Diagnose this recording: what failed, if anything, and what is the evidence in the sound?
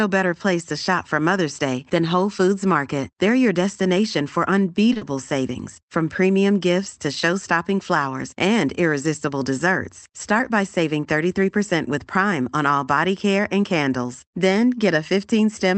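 Short stall from a late packet, at the network and jitter-buffer stage. At 4.93 to 4.97 s, just after "your destination for", the last sound is held for about 20 ms with a faint buzzy flattening. A packet arrived late, the buffer ran dry, and the receiver stretched what it had. Nothing is lost: the audio resumes exactly where it stopped, just 20 ms later. That distinguishes it from a loss, where material is skipped.

Short concealed packet loss follows directly at 4.97 to 5.03 s, before "savings from premium gifts". About 40 ms of real audio never reached the Opus decoder, whose band tops out near 8 kHz. The receiver invented a continuation of the preceding sound and blended back in, so this stretch has a brief smeared wobble. Unlike the stall, the audio resumes further along, with 40 ms missing rather than merely delayed.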